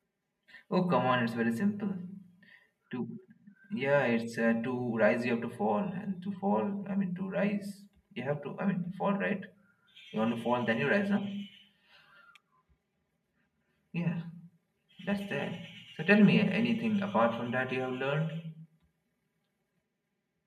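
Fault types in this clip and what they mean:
Channel delay (comb filtering): one channel runs about 5 ms behind the other, and when the two are folded to mono, matching content cancels at evenly spaced frequencies, starting near 100 Hz, leaving the speech sounding hollow and phasey for the whole clip.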